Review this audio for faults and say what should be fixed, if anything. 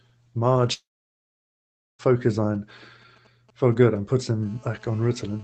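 At 0.73 s the speech breaks off. A short, fading continuation of the last sound follows, then roughly 1.2 s of near silence, and the audio resumes at 2.01 s with that stretch missing rather than delayed. This is most likely a long network dropout: no packets reached the receiver, its concealment stretched the final sound until it decayed, and playback skipped ahead once data returned. Prevent it by fixing the network path or adding redundancy and retransmission on the link.

From 2.55 s to 4.45 s there is a galloping dit-dit-dit of brief 217 Hz buzzes, roughly 30 dB below the speech. These are GSM signalling bursts. A nearby 2G phone exchanging short control transmissions with its network produces radio pulses that the audio circuit rectifies into audible buzz fragments at the 217 Hz burst rate. Prevent it by keeping mobile phones away from the microphone, cables and interface, and by using shielded, RF-filtered inputs.

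From 4.46 s to the end of the clip, a continuous hard, raspy 217 Hz buzz with a dense set of harmonics sits about 30 dB under the speech. It does not follow the speech. This is GSM phone buzz from a nearby 2G handset in an active call. It transmits 217 bursts per second, and the audio circuitry demodulates that pulse train into a steady tone. Prevent it by removing the phone from the setup or switching it off, and by adding RF suppression to the input stage.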